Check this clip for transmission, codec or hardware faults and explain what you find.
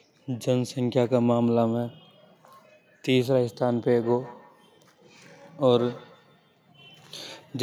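One fault is present. From 3.88 s to 6.72 s there is a feedback echo between two devices. A second device in the same room replays this talker's audio, the microphone recaptures it, and the local echo canceller cannot remove it. The speech returns at roughly 150 ms intervals, peaking at about 21 dB below the direct speech.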